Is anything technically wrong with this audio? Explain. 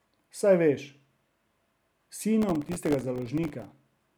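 Yes, there's a processor overload crackle from about 2.42 s to 3.71 s in this speech clip. For that stretch the machine couldn't keep up with its very short audio buffers, on the order of a millisecond or two each, and it missed dozens of deadlines again and again. Every miss drops in a tiny hard-edged gap of silence, so together they ride on the speech as a gritty, tearing crackle that clears once the load eases.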